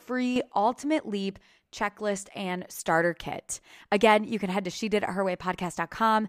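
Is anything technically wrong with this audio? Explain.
Yes. A sudden gain jump occurs between 0.36 and 0.52 s in this speech clip. Across that span the level steps up by about 6 dB from one sample to the next instead of rising smoothly, and the speech and the background noise jump together, which shows the change was applied to the whole signal rather than coming from the talker. The likely cause is a digital gain setting or bit shift applied without a ramp.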